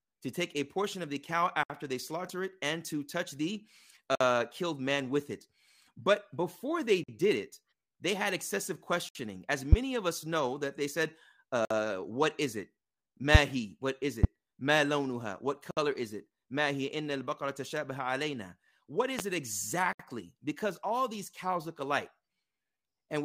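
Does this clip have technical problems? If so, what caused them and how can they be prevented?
Yes. There are gaps at a join of encoded pieces at 1.63, 4.15, 7.04, 9.09, 11.65, 15.71 and 19.93 s, each lasting 48 to 65 ms. Separately encoded speech segments were joined with their encoder start delay and last-frame padding left in. Unlike a dropout, the speech resumes exactly where it stopped. Trim encoder delay and padding, or encode the whole file in one pass.

Three single loud pops occur at 9.72, 14.24 and 19.19 s. Each lasts about 35 ms and peaks roughly 20 to 25 dB above the speech, which continues underneath. The likely cause is a voltage transient from a plug, switch, static or driver glitch. A pop adds a burst on top of the sound, while a gap removes sound. Secure connections, avoid switching during recording, and keep drivers stable.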